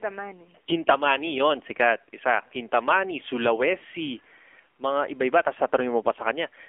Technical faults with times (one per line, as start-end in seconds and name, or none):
0.00-6.69 AMR narrowband mobile codec